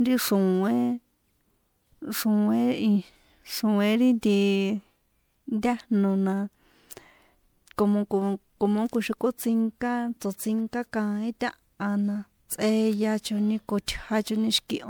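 Throughout, the speech sounds swirly, hollow and smeared, with blurred attacks: likely generation loss, with quantisation noise compounding over about four MP3 re-encodes, consistent with 128 kbit/s.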